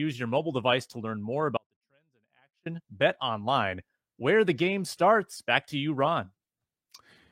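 From 1.57 to 2.66 s the speech suffers an audio dropout to a faint residue, leaving only a trace roughly 40 dB down, likely from a signal-path interruption.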